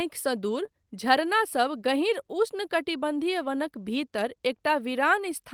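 Short concealed packet loss at 0.65 to 0.69 s: about 20 ms of the speech stream failed to arrive in time, and the receiver covered the hole by extending the sound that came just before it, carrying its pitch forward if voiced or substituting shaped noise if not, before crossfading back into the real signal. Here it comes across as a brief smear or wobble.

Lost packet rebuilt from error correction at 2.89 to 2.91 s: a 20 ms stretch, consistent with a single missing frame, was replaced by the low-bitrate duplicate carried inside the following packet, the way Opus in-band forward error correction works. Because the decoder had that copy to play, there is no gap or stall. Instead, that moment sounds rougher and noisier than the audio around it, a coarse patch lasting about one frame.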